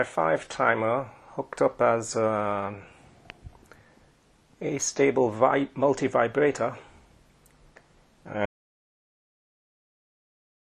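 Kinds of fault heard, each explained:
Audio dropout to silence: at 8.46 s the sound cuts off mid-flow and never returns, leaving silence with no room tone right to the end. That's most likely the input being lost, a disconnect or mute, while recording carried on writing silence.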